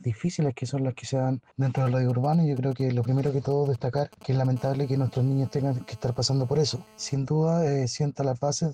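From 1.77 to 4.47 s, GSM signalling bursts break in: a nearby 2G phone emits short groups of radio pulses at 216.7 Hz, which the audio circuit rectifies into a galloping dit-dit-dit of brief buzzes, around 20 dB below the signal. A spectrogram shows clustered vertical stripes with harmonic combs.

From 4.56 to 7.14 s, GSM phone buzz follows as the phone settles into a call and transmits in bursts at 216.7 Hz. The rectified pulses give a steady, raspy buzz about 29 dB below the signal, drawn on a spectrogram as unbroken horizontal lines every 217 Hz.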